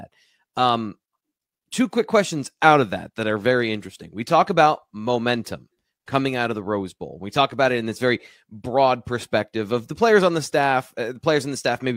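A speech recording with nothing technically wrong in it. No fault can be heard at any point in the clip.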